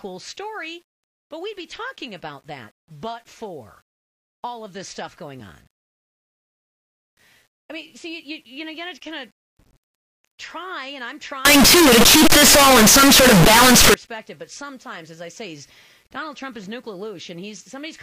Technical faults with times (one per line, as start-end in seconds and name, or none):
11.45-13.94 signed and unsigned mixed up